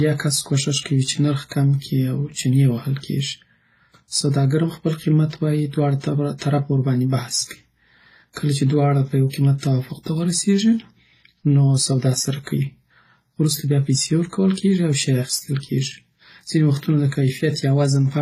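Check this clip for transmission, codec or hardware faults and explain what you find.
One codec problem runs through the whole recording. Transcoding between lossy codecs, present throughout: the speech likely passed through an older low-rate codec such as WMA at around 24 kbit/s and was then re-encoded as HE-AAC at a similar rate. The second encoder spent its scarce bits reproducing the first one's errors while adding its own, so two distinct kinds of coding smear and swirl sit on top of each other, and nothing survives above 14.9 kHz.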